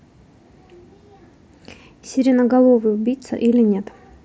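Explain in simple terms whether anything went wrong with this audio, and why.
Nothing went wrong here: the speech comes over a Bluetooth headset link using the mSBC codec, which carries sound up to about 8 kHz and adds only a faint graininess on the louder moments, and that is simply how this kind of headset connection normally sounds.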